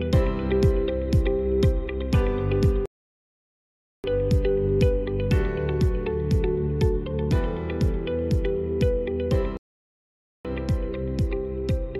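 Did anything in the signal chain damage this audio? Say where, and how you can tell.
Yes, two playback stalls at the playback stage: the output goes fully silent from 2.86 to 4.04 s (about 1.18 s) and from 9.57 to 10.45 s (about 0.88 s), likely because the player's buffer ran dry or its thread was blocked. Unlike packet-loss dropouts, these are clean, long silences without smeared concealment.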